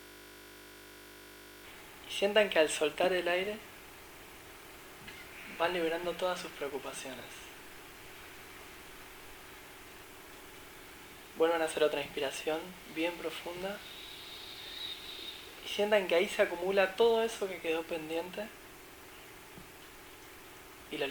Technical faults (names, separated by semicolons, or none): system hang loop